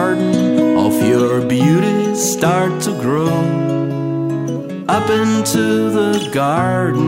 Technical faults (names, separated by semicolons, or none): none